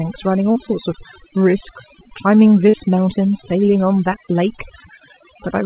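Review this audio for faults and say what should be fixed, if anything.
Overdone noise removal runs through the whole speech clip. The suppressor is pulling individual frequency bands far down whenever they sit near its noise estimate, so the pauses collapse to near silence sprinkled with twinkling specks. Quieter parts of the voice are stripped away too. On a spectrogram the background shows as black with scattered isolated dots, and the speech harmonics look ragged and patchy at their edges. Lower the reduction strength or add a floor so bands are attenuated rather than removed.

Short concealed packet loss occurs twice: from 0.52 to 0.57 s and from 2.69 to 2.75 s. In each case roughly 40 ms of audio failed to arrive, and the receiver filled most of the hole by extending the preceding sound before crossfading back into real audio. Both are heard as a brief smear or wobble. Give the jitter buffer more headroom or improve the network path to cut late or lost packets.

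The call path's band limit is audible as nothing above 4 kHz, which fits G.711 A-law at 64 kbps.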